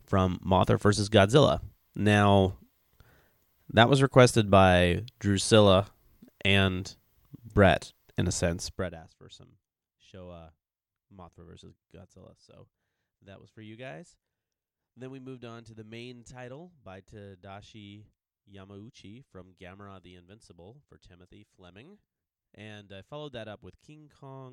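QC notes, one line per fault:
8.67–9.04 s, zipper noise: the level falls by around 25 dB in discrete 1 dB steps, roughly a hundred per second, with no smoothing between them. Each jump puts a small click in the waveform, so the fade carries an audible ticking, zipping texture.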